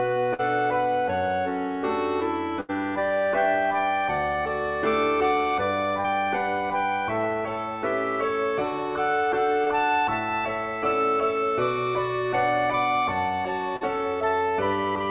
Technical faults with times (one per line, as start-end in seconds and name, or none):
0.34-0.41 burst of packet loss
2.61-2.71 burst of packet loss
6.01-6.06 short concealed packet loss
9.64-9.68 short concealed packet loss
13.76-13.83 short concealed packet loss